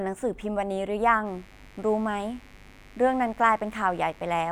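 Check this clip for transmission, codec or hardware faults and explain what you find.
One hardware fault is present: mains buzz, starting at 1.23 s and running to the end of the clip at 4.51 s. Switching spikes tied to a 50 Hz supply, two per mains cycle, leak into the speech path, likely from a dimmer, rectifier or unshielded cable. Each sharp spike carries a long series of 50 Hz harmonics extending into the kHz range, so it is heard as a steady, raspy buzz, roughly 30 dB below the speech. On a spectrogram it forms evenly spaced horizontal lines from 50 Hz upward, beginning abruptly at 1.23 s. The waveform shows small, regular spikes every 10 ms in the gaps between phrases.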